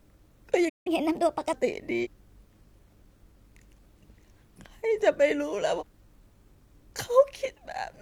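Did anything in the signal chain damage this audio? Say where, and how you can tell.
Yes. At the playback stage, the sound stops dead from 0.69 to 0.87 s, a gap of about 165 ms, then resumes where it left off. That is a playback stall, likely the player's buffer running dry. A network dropout would instead lose material rather than pause it.

Straight after the stall, from 0.87 to 1.53 s, the speech runs at 1.25 times normal speed, with pitch raised by roughly four semitones, then drops back. This is catch-up at higher speed: the player resamples its backlog to recover the lost time. Because it starts exactly when the stall ends, it reads as buffer recovery rather than clock drift.

At the codec stage, short disruptions sit at 2.00 to 2.07 s and 5.76 to 5.83 s, each about 70 ms. This is damaged data in a compressed stream: the decoder loses frame sync and hunts for the next header. Unlike a stall, it is a brief disruption rather than a long silence.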